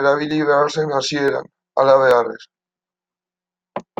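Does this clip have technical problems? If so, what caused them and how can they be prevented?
Yes. Two single sharp clicks cut through the speech, at 1.28 s and 2.11 s. These are likely dropped samples. A fraction of a millisecond goes missing, and the waveform jumps abruptly between values. Keeping buffers large enough to avoid underruns prevents this.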